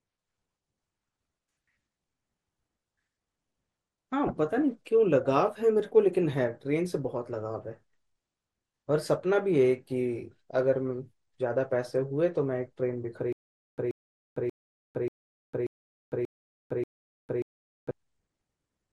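Throughout the 19-second speech recording the sound is dull and short of top end, with a granular, gurgling roughness. The upper range comes and goes rather than staying steady. This is most likely MP2 compression at a low rate, around 80 kbps. At that rate the encoder cannot feed all 32 of its sub-bands, so it switches the upper bands off and quantises the remaining ones coarsely. That combination produces the muffled, grainy texture.

From 4.27 to 4.31 s there is a brief burst of DAB burbling over the speech. Corrupted bits slipped past error correction into the MP2 stream, at an error rate on the order of a fifth of a percent. Individual sub-bands then picked up short blips of noise, with five frames hit. Because the damage stays within single sub-bands and lasts only momentarily, the result is a brief disturbance rather than a dropout.

From 13.33 to 17.91 s the audio falls into a stutter with silent gaps. 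The same 131 ms fragment repeats seven times, each one followed by about 454 ms of dead digital silence, which gives an even cycle of 585 ms. This likely comes from a stalled player or stream that replayed its last buffered fragment on each retry and then ran dry. The speech that should have filled this stretch is missing.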